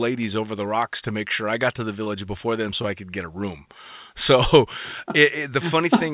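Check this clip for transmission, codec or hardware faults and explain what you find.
Two short concealed packet losses turn up in the speech. The first is at 2.04 to 2.08 s, right after "I got to the". The second is at 2.82 to 2.86 s, after "before them" and before "I could get a". In each case roughly 20 ms of audio didn't reach the decoder in time. The receiver papered over the gap by extending the preceding sound and then blending back into the real signal, so you hear a quick smear or wobble. The narrowband call sound, with nothing above 4 kHz, points to G.711 A-law.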